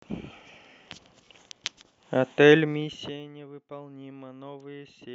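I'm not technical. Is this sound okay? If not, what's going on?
No. Between 2.52 and 3.32 seconds, the speech volume is turned down in many small jumps, about thirty a second, instead of one smooth fade. Each jump leaves a tiny click, so the speech gets quieter under a fast ticking, a fault called zipper noise.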